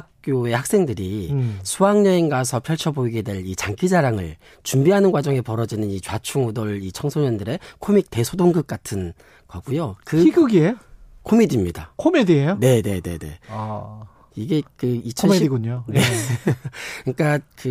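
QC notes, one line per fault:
No faults heard in this speech clip; nothing to log.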